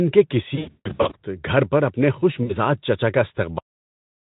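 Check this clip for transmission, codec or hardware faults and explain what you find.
Two kinds of fault are present, heard through a Speex speech codec whose bitrate sounds to be around 18 kbps.

VoIP packet loss concealed by the speech codec occurs from 0.55 to 1.17 s and again from 2.44 to 2.57 s. In the first burst, lost packets amount to about 400 ms scattered over 560 ms, with the longest gap 160 ms. The second amounts to about 60 ms. The decoder fills each gap by extending its last pitch and spectral shape while lowering the gain, so the speech smears into a buzzy tone or coloured noise that fades. Because each frame is predicted from the one before, it stays weak and distorted briefly after packets return.

A cut-off end occurs at 3.58 s. The final buffers were never delivered, so the speech stops abruptly mid-sound and falls straight to digital silence, with no natural decay, for the remaining 0.7 s.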